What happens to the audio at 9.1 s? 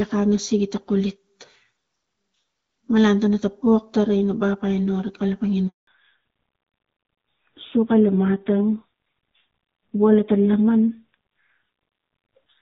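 By 9.1 s the call has already fallen back to narrowband, a state that runs from 5.87 s to the end. The link dropped from AMR-WB at 12.65 kbit/s to AMR-NB at about 7.4 kbit/s, so the sound is duller and rougher. On a spectrogram, everything above 4 kHz is cut flat.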